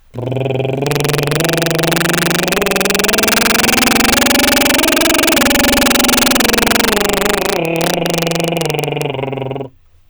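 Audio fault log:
Throughout, integer overflow: the music is driven about 8 dB past full scale, and roughly 3 percent of samples exceed the integer limit and wrap to the opposite sign instead of being held. Each wrapped peak jumps across the whole range, giving violent cracks on loud passages, far harsher than clipping.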